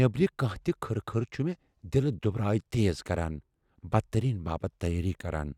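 No technical faults can be heard anywhere in this recording of speech; the signal stays continuous and stable throughout.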